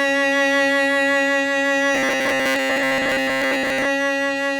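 From 1.95 to 3.85 s the music turns into a robotic sound, a rigid 133 Hz buzz, most likely from repeated short buffers of about 7.5 ms looping.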